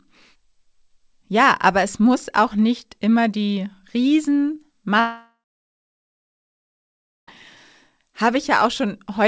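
At 5.00 s the speech gives way to a brief buzzing or hissing continuation of the last sound that fades within a few tenths of a second, leaving about 1.9 s of silence until the audio resumes at 7.29 s, roughly 2.3 s of content gone for good. This is likely a long network dropout: packets stopped arriving, the receiver stretched the final sound to cover the gap, then fell quiet. The call path's 8 kHz bandwidth limit is audible throughout.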